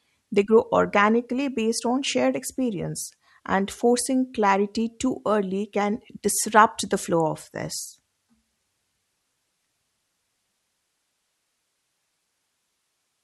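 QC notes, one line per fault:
No technical faults detected.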